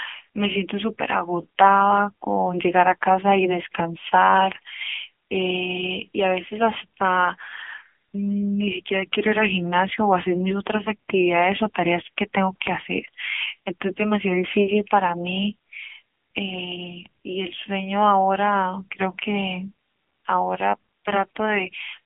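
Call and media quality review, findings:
AMR narrowband mobile codec, throughout the speech. Band limited to roughly 150 Hz to 3.4 kHz, with nothing above 3.5 kHz. Plainly audible buzzy, synthetic texture, which fits a low AMR-NB mode near 8 kbps. The vocal-tract model, fed by sparse pulses every 5 ms, smears the voicing. A plain low-pass filter would dull the sound without this buzz.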